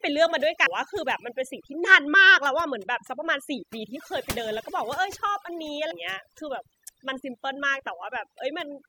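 From start to end, overdone noise removal leaves the background lowered and broken up into twinkling specks. The reduction pulled individual frequency bands down whenever they sat near its noise estimate, taking quiet speech detail with them.

Compressed frames are skipped at 0.65 s, 1.86 s, 3.95–3.97 s and 5.90–5.92 s. Each time the speech jumps ahead by about 200 ms, 100 ms, 300 ms and 200 ms respectively. The frames are 23.2 ms long.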